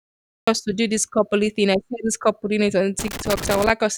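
A speech recording with two faults. The opening half-second is dead digital silence, then the audio jumps in abruptly at about 0.48 s, mid-sound, with no natural attack, just before "to do this coupley". That is a cut-off start: the recording or stream began late and caught the sound already under way. Later, right after "couple doing it on", an irregular burst of crackle and scratching runs from about 2.99 to 3.70 s. That is loose connector crackle, where a worn or dirty contact rapidly makes and breaks the signal path as it moves, chopping the audio.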